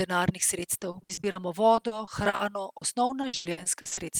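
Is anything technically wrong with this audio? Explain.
Yes. Repeated packet loss (robotic sound) hits three stretches: 0.79 to 1.37 s, 1.75 to 2.41 s, and 2.77 to 3.99 s. Lost packets are patched by stretching the previous sound, so speech turns choppy with pieces missing. Unlike a single dropout, gaps recur rapidly, with up to about 38% of each stretch concealed and gaps reaching 100 ms.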